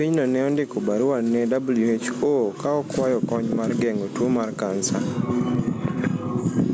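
Speech with gain pumping throughout, a level swing of roughly 15 dB. It's likely caused by a fast limiter clamping heavily over-driven microphone gain. On a waveform the envelope looks flattened. Call microphone processing is also audible, with nothing showing above 8 kHz on a spectrogram.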